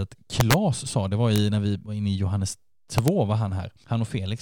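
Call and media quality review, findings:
Violent cracks on loud speech peaks, far harsher than clipping: 0.40–0.54 s just before "sa det var", 1.36–1.38 s between "sa det var" and "när vi var inne", 2.98–3.08 s. Integer overflow in a gain or mixing stage. Peaks pushed about 1 dB past full scale (the 1.36 s event barely at it) wrap to the opposite sign instead of being limited, so each sample over the limit flips across the full range.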